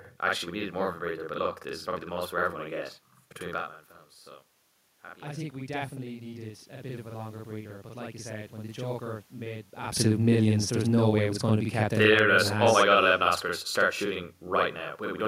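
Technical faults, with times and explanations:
Throughout, channel delay (doubling): every syllable is followed by a second, equally loud copy about 46 ms later, giving a doubled slapback quality. One channel arrives late, which fits a 2048-sample buffer, and both are summed to mono.
5.02 to 9.72 s, automatic gain rising: the speech and the room noise behind it swell together by about 7 dB over nearly five seconds. The input had dropped by about 15 dB after the talker moved, so the gain control slowly raised its gain.
9.96 to 14.87 s, automatic gain falling: the speech starts loud and then sinks by about 7 dB over nearly five seconds, with the background noise sinking alongside it. After the talker moved again near 10 s, the gain control judged the input too loud and gradually lowered its gain.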